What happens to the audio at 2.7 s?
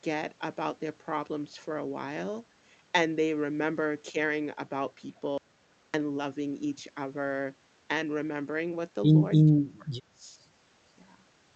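Nothing goes wrong at 2.7 s; the speech carries on intact through that moment.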